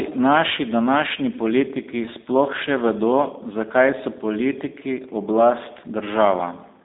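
Speech carrying G.729 codec damage throughout: the band is confined to about 250 Hz to 3.7 kHz with nothing above 3.8 kHz, and the rough, slightly synthetic texture comes from rebuilding each frame from a vocal tract filter, pitch predictor and sparse pulses, which fits an 8 kbit/s coder.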